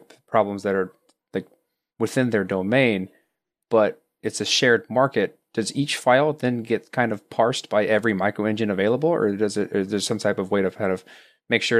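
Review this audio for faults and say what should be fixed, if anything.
Nothing here needs fixing; I couldn't pick out any technical fault anywhere in the recording.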